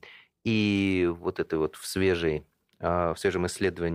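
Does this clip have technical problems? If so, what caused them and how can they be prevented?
No, there's nothing technically wrong to point out in this speech clip, so there's nothing that needs preventing either.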